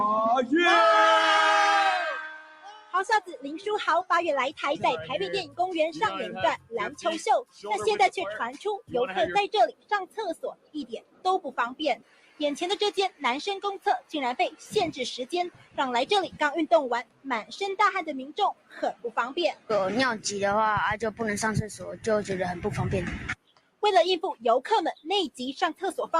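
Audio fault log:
Throughout, noise suppressor applied to music or sounds: a speech-oriented suppressor stays engaged and treats sustained, steady content as noise. Gain swings by roughly 15 dB, so onsets pass while held material and decays are pulled down, giving audible pumping and a thinned sound.
2.07–4.11 s, 6.58–7.65 s, 8.56–17.52 s, 18.54–19.7 s, 23.35–23.83 s, 24.95–25.82 s, sound cut by the noise suppressor: here the suppressor clamps harder, with drops of about 13 to 17 dB. Steady or fading sound sinks and tails are truncated, most extensively across the long 8.56–17.52 s stretch.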